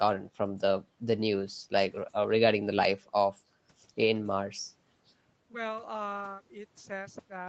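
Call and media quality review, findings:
Nothing to flag on this speech; the call path's usual 8 kHz top end and coding texture are all that shows, and that's just how the line normally sounds.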